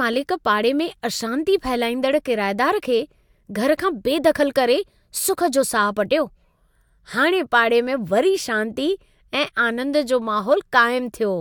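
No technical faults can be heard anywhere in the speech.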